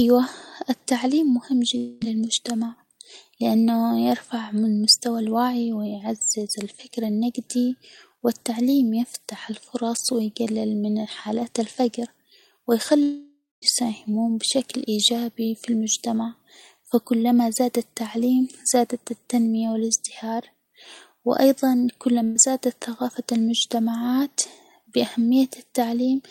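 A long network dropout at 1.77 to 2.03 s and again at 13.03 to 13.64 s likely left stretches of roughly 240 ms and 600 ms unplayed. The receiver extends the last sound as a fading buzz or hiss; the second stretch sinks into about 0.2 s of silence before the sound returns further on.

A burst of packet loss at 22.24 to 22.48 s drops about 120 ms. The last sound is held and turned down into a brief fading buzz or hiss, then the audio picks up again with that slice missing.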